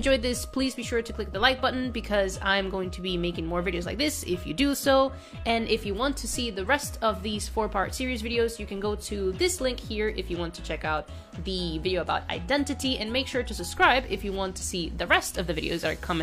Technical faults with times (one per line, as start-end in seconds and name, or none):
none